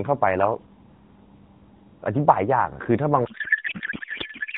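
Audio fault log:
3.26–4.57 s, codec payload misread: From 3.26 s to the end, the speech turns into garbled noise and warble that barely tracks it. Until then the narrowband AMR sound, band-limited below 4 kHz and only lightly coloured, fits a 12.2 kbps mode. The breakdown points to the receiver unpacking frames with the wrong layout, most plausibly octet-aligned AMR read as bandwidth-efficient. The bits land in the wrong parameter fields, so the decoder builds valid-looking but meaningless frames.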